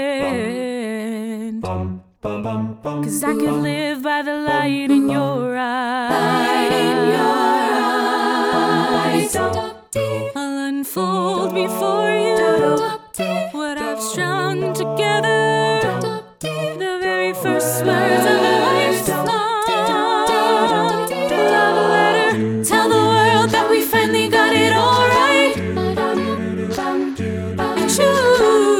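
No technical faults can be heard anywhere in this recording.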